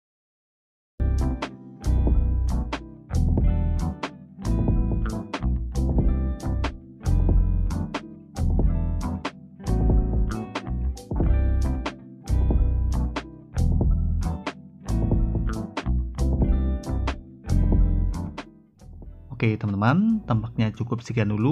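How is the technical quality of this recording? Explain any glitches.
The recording has one clear glitch, at the very start. It has a cut-off start: digital silence until 1.0 s, then sound begins abruptly mid-event. Capture started late, so there is no natural attack.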